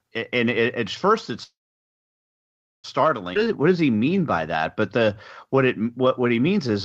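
At 1.43 s there's a call audio freeze, likely the jitter buffer running dry while packets were held up. The sound stretches into a brief fading tail, then about 1.3 s of silence until 2.86 s, when it resumes right where it stopped. At 3.34 s it will skip ahead, jumping forward with almost no gap as roughly a second of audio is dropped and the two sides are stitched together. From 3.38 s to 6.73 s a jitter buffer slow-down kicks in. Repeated pitch periods stretch that stretch to 91% speed, adding 293 ms, so it drags a little at the same pitch.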